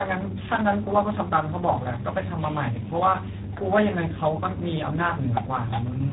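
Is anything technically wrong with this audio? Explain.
Yes, there's tandem speech coding across the whole clip. The speech went through two low-rate speech coders in a row, which fits G.729A followed by G.726, the second re-encoding the first's damage. It sounds rough, muffled and warbly, with nothing above about 3.8 kHz.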